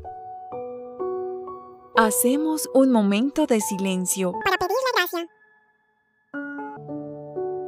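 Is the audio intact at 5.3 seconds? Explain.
No. From 4.41 to 6.77 s a section at the wrong speed runs 1.94 times too fast, likely clocked wrongly, so the sound turns hurried and about ten semitones higher.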